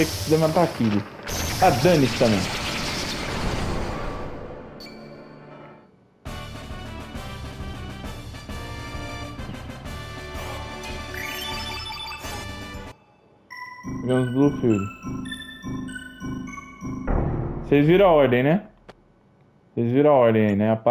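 No technical faults are audible anywhere in the recording.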